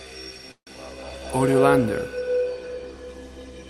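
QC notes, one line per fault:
0.51–0.69 s, call audio freeze: the last sound is stretched into a fading buzz, then about 90 ms of silence, and the audio resumes exactly where it stopped. This is likely a jitter buffer running dry, not a dropout, since nothing is lost, only a 154 ms delay added.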